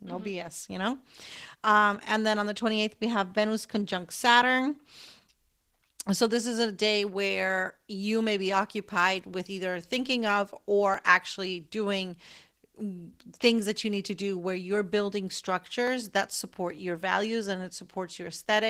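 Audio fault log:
Throughout: Opus voice compression. The speech sounds muffled and hoarse, with a slightly robotic edge. At around 16 kbps in hybrid mode, the linear-prediction layer codes the excitation coarsely, and the thin upper layer carries only a rough outline of the highest frequencies.
10.94, 15.87, 16.78 s: dropped samples. Each is a single sharp click, a thin vertical line in the spectrum. The likely cause is a fraction of a millisecond missing from the stream, which makes the waveform jump abruptly to a later value.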